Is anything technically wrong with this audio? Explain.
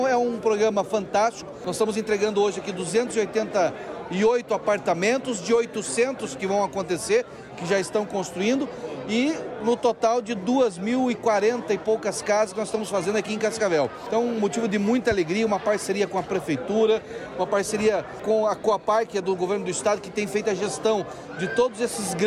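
Yes. From 0.11 s to 22.24 s the audio carries clock slip clicks: a fine, regular ticking, roughly every 40 ms, so fast that it blurs into a soft rattle running under the sound. The likely cause is two devices running on unsynchronised clocks that disagree by roughly 700 ppm. Each time that mismatch adds up to a whole sample, one sample is dropped or repeated, and each slip leaves a tiny click.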